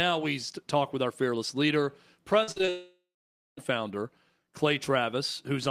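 Speech, and right after "with our fearless leader", from 2.43 to 2.69 s, repeated packet loss (robotic sound) sets in: several short holes, the longest 45 ms, patched so nearly half the span sounds choppy. From 2.69 to 3.59 s it turns into one continuous gap, likely a long network dropout: the last sound smears into a fading buzz or hiss, then about 0.55 s of silence, and speech resumes with roughly 0.88 s lost rather than chopped.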